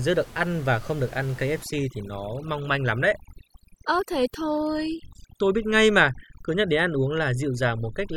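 Speech, with overdone noise removal kicking in from about 1.63 s right through to the end: the denoiser is set too hard, gating out bands it mistakes for the room noise (about 21 dB under the voice), so the background drops and breaks up into twinkling specks.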